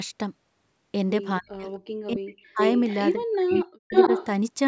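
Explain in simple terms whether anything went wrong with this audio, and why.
The voice nearly vanishes from 1.39 to 1.66 s, from 2.06 to 2.6 s and from 3.44 to 3.93 s, and dips briefly at 3.15 to 3.27 s. This is speech suppressed in double talk, likely from an echo canceller turning everything down while both sides spoke.

A second, delayed copy of the voice follows it, arriving about 0.43 s late, at 2.59 to 3.13 s, 3.39 to 3.59 s and 3.91 to 4.26 s, sometimes as loud as the original. This is echo leak, likely from a loudspeaker's sound reaching a microphone and being sent back.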